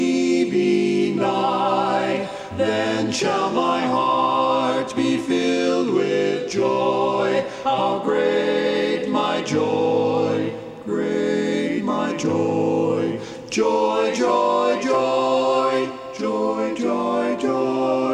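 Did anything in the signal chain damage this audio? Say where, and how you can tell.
No, nothing in the signal chain stood out as damaging this audio on listening.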